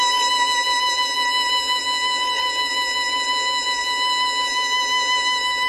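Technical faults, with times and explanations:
Throughout, HE-AAC compression: the music has nothing above 12.3 kHz and plainly audible codec damage, with a gritty, metallic top end. This is likely HE-AAC at a very low bitrate near 16 kbps, rebuilding the treble by copying lower bands upward, so upper harmonics don't line up.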